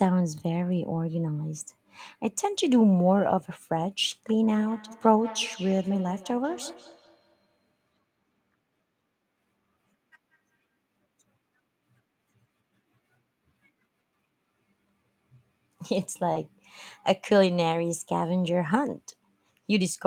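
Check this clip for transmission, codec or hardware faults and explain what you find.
Three kinds of fault are present: packets lost and rebuilt from error correction, a feedback echo between two devices, and one short concealed packet loss.

Lost packet rebuilt from error correction, at 0.93–0.95 s, 6.53–6.59 s and 16.35–16.37 s: the decoder played low-bitrate backup copies of lost frames. Each patch of about 20 ms, or 40 ms at 6.53 s, which points to two packets, sounds briefly rougher and noisier.

Feedback echo between two devices, from 4.44 to 10.76 s: a second device's playback fed back into this microphone. The speech returns roughly every fifth of a second, thin and ringing, peaking at about 19 dB below the speech.

Short concealed packet loss, at 16.33–16.37 s: about 20 ms never arrived, and the receiver extended the preceding sound to fill it. This produces a brief smear that overlaps the rebuilt frame at 16.35 s.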